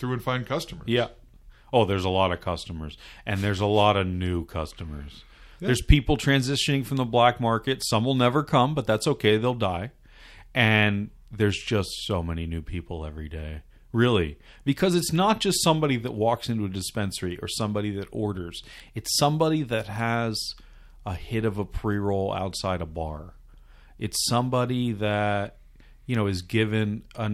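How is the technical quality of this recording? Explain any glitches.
No audible technical faults.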